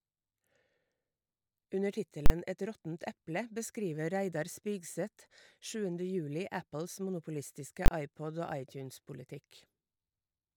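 Invalid numbers at full scale: a calculation failed and pinned the output to maximum, so the speech breaks into loud bangs at 2.26–2.30 s and 7.86–7.88 s.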